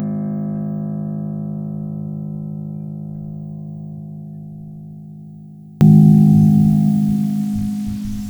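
From 0.0 to 5.81 s the music nearly vanishes, dropping about 32 dB. Centred parts and bass cancel. This is likely one channel inverted, summed to mono.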